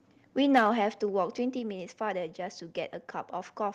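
The microphone input was likely driven about 5 dB past the converter's limit from 0.54 to 0.67 s, a microphone overload that flattens peaks into a harsh, crackly edge on the speech. At 0.58 s the input was likely turned down by about 3 dB, a microphone volume step-down that makes voice and background drop abruptly in level.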